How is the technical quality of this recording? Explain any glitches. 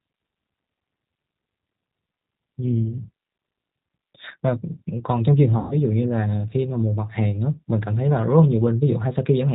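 The recording is narrowband, codec-coloured speech with one audible dropout.

G.729 codec damage runs throughout the clip. The codec does not store the waveform. It sends a vocal tract filter, a pitch predictor and a few pulses per short frame, and the decoder rebuilds speech from those. Nothing above 4 kHz survives, so the speech sounds muffled, and the sparse pulse excitation gives it a plainly audible rough, slightly synthetic texture, which fits an 8 kbit/s G.729A stream.

VoIP packet loss concealed by the speech codec occurs from 5.59 to 5.76 s. About 120 ms of audio went missing, which points to six 20 ms packets being lost. With no new data, the decoder kept extrapolating from the last pitch and filter settings and lowered the gain frame by frame. The speech smears into a buzzy tone or a coloured noise that fades, and it stays weak or distorted briefly after packets resume, because each frame builds on the previous one.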